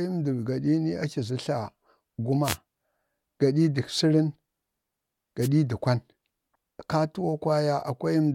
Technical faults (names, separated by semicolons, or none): wireless microphone noise hit